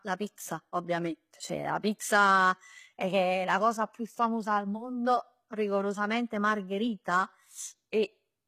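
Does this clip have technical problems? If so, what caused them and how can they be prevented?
Yes. Throughout the speech, the encoder was likely an HE-AAC compression stage that coded only the lower spectrum and rebuilt the treble by copying lower bands upward under a coarse envelope. The damage is plainly audible and fits a bitrate near 20 kbps. Because the synthesized treble is not the original, its harmonics fail to line up with those below, and s sounds come out gritty and metallic. Encoding at a higher bitrate, or with a full-band codec, prevents this.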